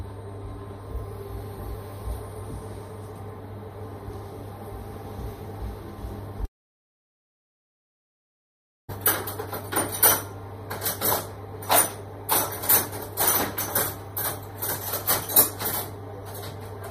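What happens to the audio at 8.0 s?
At 8.0 s you're in the middle of a long network dropout running from 6.45 to 8.90 s: the sound stops, leaving near silence, likely because packets never arrived.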